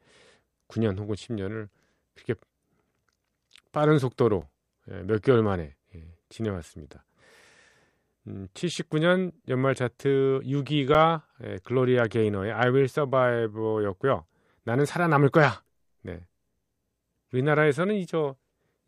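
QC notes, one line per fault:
4.41 s and 10.94 s, underrun with held sample: the speech freezes flat for 5.8 ms at its last value, fitting a 256-sample buffer, and about 5 ms of audio is lost rather than merely paused.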